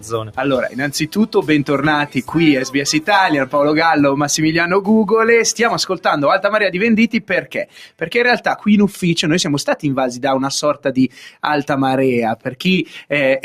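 A noise suppressor applied to music or sounds runs for the whole clip, treating sustained, steady material as noise and swinging its level by around 10 dB. Unlike a plain compressor or gate, it acts on steadiness rather than loudness, so sharp attacks pass while held tones and tails sink.

Sound cut by the noise suppressor shows as dips of about 9 to 10 dB at 0.00–0.39, 1.10–1.43, 2.05–2.33, 7.14–8.08, 10.74–10.90, 11.08–11.44 and 12.36–12.61 s, the longest near 7.1 s. These are thinning dips, not dropouts: the sound never vanishes, and decays are cut short.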